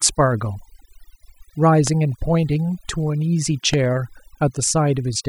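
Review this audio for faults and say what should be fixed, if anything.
Overdone noise removal runs throughout: the reducer was set too aggressively, cutting individual frequency bands near its noise estimate, so the speech sits over near-silent, twinkling gaps. Loud pops at 1.87 to 1.89 s and 3.74 to 3.76 s were likely caused by a voltage spike from a switch, static or connection, producing sharp clicks about 15 dB and 10 dB above the speech. To prevent both, use gentler noise-reduction settings on a cleaner source and keep cables, switches and connections secure and stable while recording.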